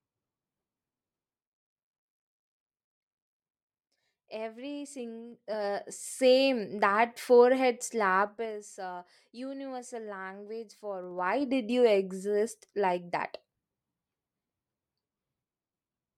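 Zipper noise at 5.24–6.2 s, 8.2–8.56 s and 11.0–11.48 s: the speech level jumps in unsmoothed 2 dB steps, about 7, 20 and 15 per second, rising about 10 dB, falling about 15 dB, then rising about 15 dB, each step clicking into an audible ticking.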